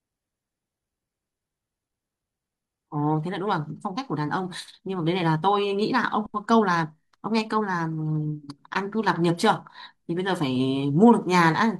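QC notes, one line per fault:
Nothing to flag on this speech recording, as no faults turned up anywhere in it.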